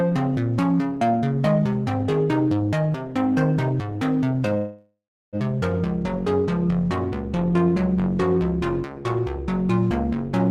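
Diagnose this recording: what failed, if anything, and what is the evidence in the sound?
At 4.57 s the sound stalls into a fading buzz, then goes silent for about a third of a second, and resumes at 5.36 s with nothing skipped. This is a call audio freeze. Packets were likely delayed on the network and emptied the jitter buffer, adding 0.75 s of delay.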